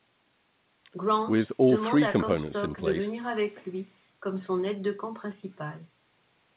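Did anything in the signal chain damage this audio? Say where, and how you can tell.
No, nothing in the signal chain damaged this speech. The call's microphone processing has taken out the lowest bass as expected, and the band stops at 4 kHz, which fits a G.711 mu-law codec at 64 kbps working normally.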